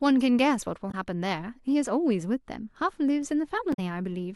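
Speech clip with damaged data in a compressed stream: corrupted bytes made the decoder misread frames and lose sync while it hunted for the next valid header, producing short glitches at 0.90 to 0.95 s and 3.72 to 3.79 s.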